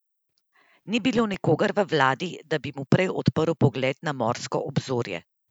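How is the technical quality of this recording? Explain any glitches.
The recording has one short glitch: CD scratch ticks in the speech between 1.03 and 1.34 s. Three brief ticks, the longest about a millisecond, mark where a scratch defeated the disc's error correction on successive rotations, so the player briefly interpolated or muted the damaged samples.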